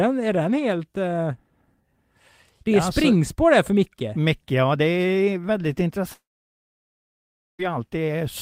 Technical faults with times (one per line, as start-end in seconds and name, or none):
6.13-7.61 long network dropout